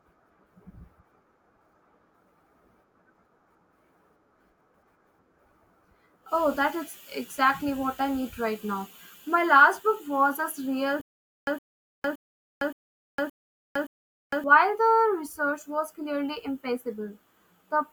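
A speech recording with a stutter with silent gaps from 11.01 to 14.44 s: a 113 ms fragment repeats six times, each followed by about 458 ms of dead digital silence, giving a steady 571 ms cycle. The likely cause is a stalled player or stream replaying its last buffered chunk on each retry before running dry. Unlike a simple dropout, the same burst recurs, and the speech that belonged in that span never arrives.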